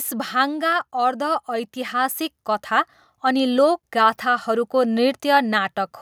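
From 0.05 s to 0.93 s the speech starts out loud and then sinks by about 4 dB, with the background noise dropping right along with it rather than the voice alone getting quieter. That shared fall is the mark of automatic gain falling: the automatic gain control judged the incoming level too high and pulled its gain down step by step over those first nine-tenths of a second, scaling everything it passed.

Almost immediately, from 0.91 s to 3.51 s, the level turns around and swells by about 7 dB over roughly two and a half seconds, voice and background rising together as one. This is automatic gain rising: the gain control now found the input too quiet and slowly pushed its gain back up, so the room tone climbs with the speech instead of staying steady underneath it.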